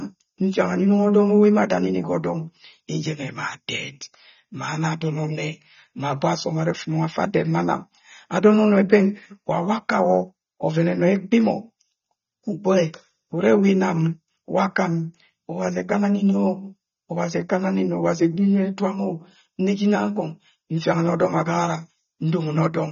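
AAC compression throughout: the speech has nothing above 6.9 kHz and sounds dull and smeared, likely from AAC-LC coding at a rate that fits 24 kbps.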